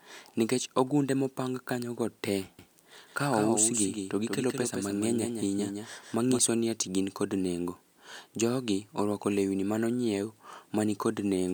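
Likely a second, slower capture path mixed the speech in twice: a doubled audio track from 2.59 to 6.39 s repeats it about 150 ms late, roughly 5 dB quieter.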